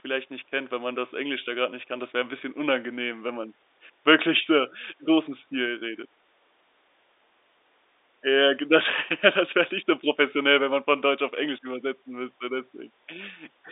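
Speech over G.711 telephone coding, limited to the 300 Hz to 3.7 kHz line band with nothing above 3.8 kHz, with no technical faults.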